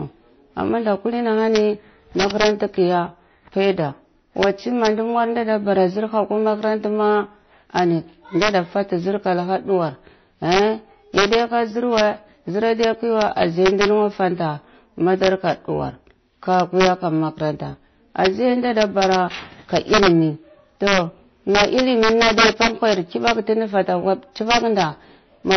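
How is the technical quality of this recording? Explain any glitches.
The recording has two faults running through its whole length: wrapping distortion on loud peaks and a band-limited, doubly processed codec sound.

Integer overflow is present from start to finish. A gain or summing stage drove the signal about 5 dB past the largest value its integer format can hold, and instead of being limited, those samples wrapped around to the opposite extreme. Only a small fraction of samples, well under one percent, go over, but each one jumps across the full range. On the louder moments of the speech this produces sudden, violent cracks, far harsher and more abrupt than ordinary clipping.

Transcoding between lossy codecs also affects the entire clip. The cause is likely a chain of two lossy encodings: the sound points to an earlier low-rate MP3 stage of around 28 kbit/s followed by a WMA stage of around 64 kbit/s. 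The second encoder wasted its bits reproducing the first one's damage and added artefacts of its own. Nothing remains above 6.1 kHz, so the speech sounds dull and muffled, with the artefacts of both codecs heard together.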